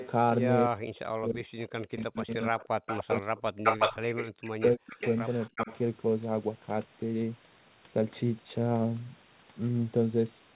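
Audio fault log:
0.00–0.08 s and 2.17–5.77 s, echo leak: A delayed, quieter copy of the speech sits under the talker. In the brief opening scrap it trails by about 300 ms at about 15 dB down. In the longer stretch it trails by about 354 ms at only about 10 dB down. The likely cause is a far-end loudspeaker whose echo canceller failed to remove its own playback, sending it back up the line.
0.66–4.11 s, 4.75–4.97 s, 5.57–5.71 s, speech suppressed in double talk: The talker's level collapses in pieces. Across the first span, roughly 3 s in total is affected, with drops as deep as about 40 dB. A second short hole of about 200 ms dips similarly deep. The last, about 70 ms long, dips only about 15 dB. This is likely an echo canceller that could not separate local speech from loudspeaker echo while both sides talked, so it attenuated everything at once.
4.39–4.44 s, background gated by the echo canceller: The room sound drops out for about 50 ms, falling by about 32 dB, then returns. 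The microphone path was clamped down hard while the loudspeaker played and released as soon as the canceller let go. It sits against a narrow G.711 call band topping out near 4 kHz.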